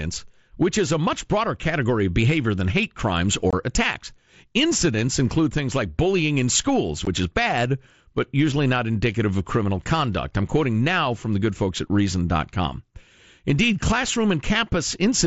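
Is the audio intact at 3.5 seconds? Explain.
No. From 3.51 to 3.53 s, right after "behavior than hate crimes", unconcealed Bluetooth headset packet loss cuts about 22.5 ms of speech, which fits three lost mSBC frames. Silence or an idle pattern fills the gap, so there is a hard-edged hole, unlike concealed loss, which smears or repeats sound.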